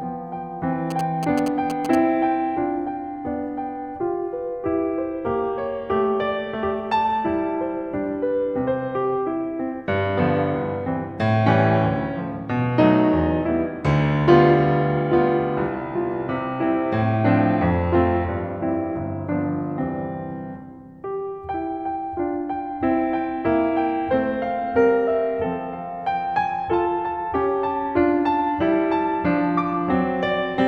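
A music clip with GSM signalling bursts from 0.91 to 1.95 s. A nearby 2G phone is signalling, and the audio circuit rectifies its radio bursts. They sound like a galloping run of short buzzes at 217 Hz, roughly 10 dB below the music.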